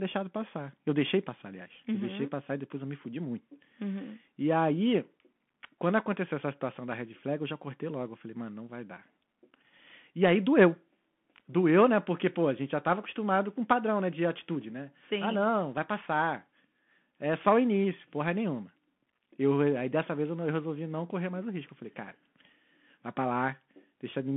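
Throughout the speech, a Bluetooth CVSD headset codec narrows the band to about 200 Hz–3.4 kHz, fitting a 64 kbps link. Its one-bit delta steps lag loud highs, so s sounds turn scratchy over granular hiss; a spectrogram shows an empty band above 3.4 kHz.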